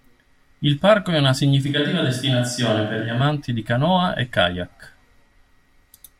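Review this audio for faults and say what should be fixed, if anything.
From 1.67 s to 3.21 s the speech abruptly turns roomy, hollow and thinner in the low end, then snaps back just as suddenly. The level stays about the same, with faint room noise roughly 35 dB below the speech. This is likely a switch to a distant microphone: the close mic's signal dropped out and a farther pickup, such as a camera mic, filled the gap with more of the room's reflections. Monitor the close mic throughout recording and check its connection and battery before takes.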